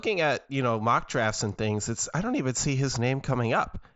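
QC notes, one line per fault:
No faults found.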